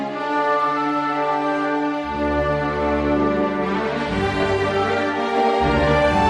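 No technical faults are audible.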